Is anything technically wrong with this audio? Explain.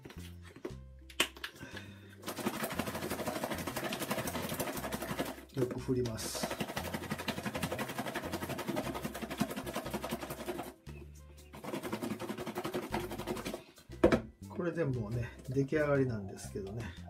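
Yes. From 4.36 to 4.42 s a brief smeared, phasey patch replaces the audio. This is AAC frame loss with concealment: a roughly 43 ms gap, consistent with one lost frame, was filled from the preceding spectrum.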